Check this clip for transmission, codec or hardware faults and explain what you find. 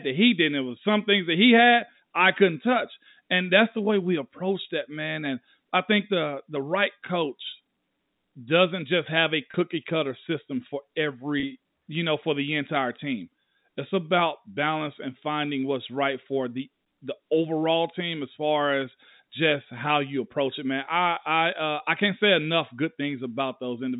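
Two brief dropouts in the speech, both packet loss with pitch repetition. The first runs from 9.51 to 9.54 s, between "doesn't just have a" and "cutter system for". The second runs from 11.40 to 11.43 s, between "cutter system for" and "you know for the". Each gap is about 30 ms, which fits a single lost packet. The receiver fills it by repeating the last pitch period, so you hear a short held, slightly buzzy blip. The audio reaches you through G.711 A-law telephone coding at 64 kbps, which keeps everything under 4 kHz.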